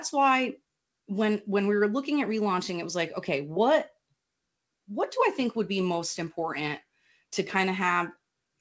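No technical faults are audible.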